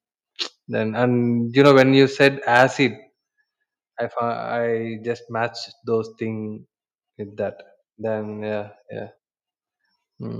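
Speech, with microphone overload at 1.6–1.82 s and again at 2.22–2.28 s and 2.55–2.63 s. The loudest syllables pick up a harsh crackle, likely from input gain driving peaks about 5, 2 and 3 dB past the converter's limit. On the waveform the peaks are flattened, and the spectrogram shows broadband smearing. At 2.13 s the microphone volume is stepped down: voice and background drop together by about 3 dB, seen as a sudden lower envelope, likely software gain control reacting to the first distorted burst.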